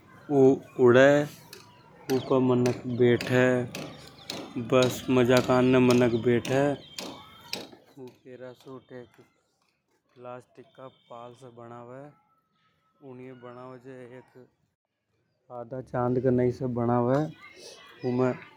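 From 15.54 to 16.08 s there's zipper noise: a roughly 20 dB level move in unsmoothed 1 dB steps, about forty a second, ticking audibly.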